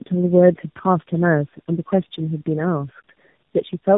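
Tandem speech coding throughout: three speech codecs in a row each re-coded the previous one's damage, leaving rough, warbly, muffled speech with nothing above 3.8 kHz.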